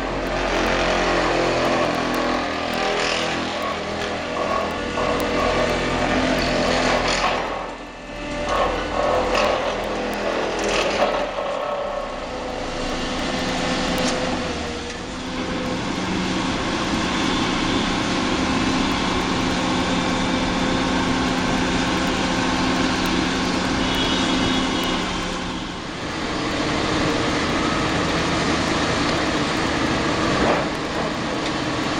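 From about 0.17 s right through to 31.94 s there's a steady run of word clock ticks, roughly ten a second, a few hundred in all. The receiving device is running on its own clock, drifting around 200 ppm off the sender, so every slip drops or repeats a single sample.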